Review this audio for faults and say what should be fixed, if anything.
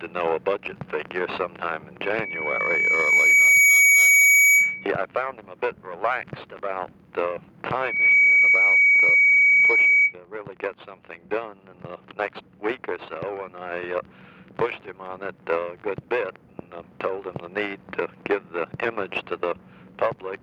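Gain pumping runs through the whole recording: the level ducks by around 10 dB each time a loud sound arrives, so loud and soft passages sit unnaturally close in level. The likely cause is input gain set far too high with a fast limiter or compressor clamping down on each peak. Unlike a noise gate, which cuts the background to silence and then opens, pumping keeps the background audible and makes it rise and fall smoothly. To prevent it, lower the microphone gain so the limiter seldom acts, or slow its attack and release.

Loudspeaker feedback squeal occurs twice, from 2.04 to 4.91 s and from 7.82 to 10.14 s, both times as a single 2.3 kHz tone. The microphone is picking up the loudspeaker it feeds, and at 2.3 kHz the loop gain exceeds one, so that frequency grows by itself. The first squeal builds over about a second and a half to roughly 10 dB above the signal. The second builds in about 0.3 s to roughly 15 dB above it. 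Unlike a steady interfering tone or hum, this one swells on its own and keeps the same pitch on both occasions. To prevent it, keep the microphone out of the loudspeaker's coverage, lower the monitor level, or notch out 2.3 kHz in the loudspeaker feed.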